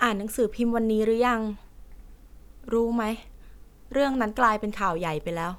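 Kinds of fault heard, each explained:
No kinds of fault are heard in this speech clip.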